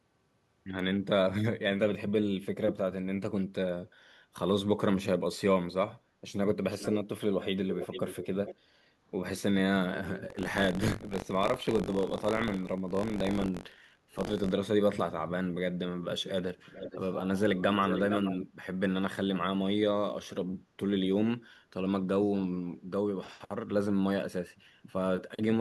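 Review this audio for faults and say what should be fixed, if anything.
There are two things to fix. First, echo leak: a delayed copy of the speech comes back at 6.71–6.98, 7.7–8.27, 8.46–8.55, 16.72–17.0 and 17.54–18.46 s. It trails by 441 ms, then 453 ms, and sits about 5 to 15 dB under the speech. The likely cause is a far-end speakerphone whose echo canceller isn't fully removing what its mic picks up. Get that side on a headset or fix their AEC.

Second, buffer tearing from 10.28 to 14.52 s, heard as a robotic buzz at 46.9 Hz that's only there while speech is. That rate fits a 1024-sample buffer where the writer and reader have slipped, so a small slice of each period, about 40 ms stale, gets spliced in with hard edges. Keeping the audio thread's write pointer properly synced to the hardware read position, with enough headroom, should stop it.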